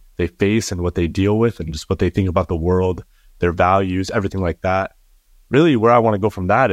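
No technical faults are audible.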